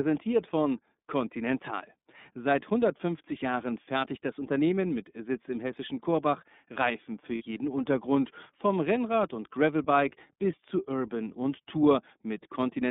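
Speech, carried through the iLBC codec. The band runs only from about 150 Hz to 3.7 kHz, so the sound is thin and telephone-like. Each 30 ms frame is coded on its own, and the roughness and synthetic edge are plainly audible, which fits the 13.33 kbps mode. From 7.35 to 7.42 s there are lost iLBC frames. About 60 ms is missing, which points to two lost frames. The decoder fills the gap by repeating the last pitch cycle with added noise, so it sounds like a short, held, buzzy vowel. The voice returns cleanly right after, because each frame decodes independently.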